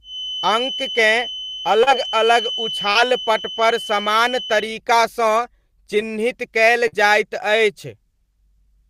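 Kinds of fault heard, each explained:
Feedback whistle: a steady 3 kHz tone, around 10 dB below the speech for the first 4.7 s, likely from a speaker-to-microphone loop; it shows as a thin horizontal spectrogram line.
Short concealed packet loss: three 40 ms gaps, one just after "चिह्नित कयल", are filled by extending the previous sound, giving brief smears that appear as short, unnaturally regular waveform stretches.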